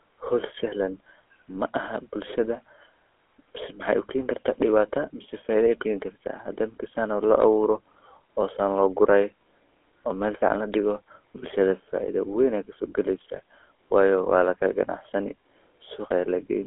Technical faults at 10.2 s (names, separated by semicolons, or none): GSM full-rate codec